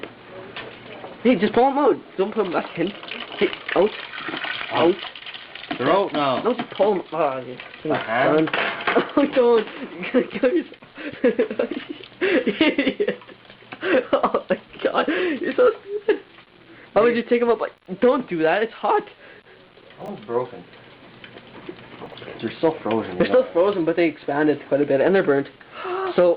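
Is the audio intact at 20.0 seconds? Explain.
No. From 20.02 to 20.08 s the chunks are out of order: one 20 ms block of audio reached the output late and was played after material that should have followed it, which fits a block held back by two chunk slots. Nothing is missing, but the 60 ms stretch plays in the wrong order, with three abrupt joins. The result is a brief jumbled moment.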